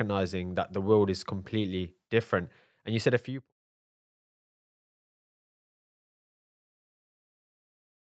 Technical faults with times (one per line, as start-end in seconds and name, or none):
none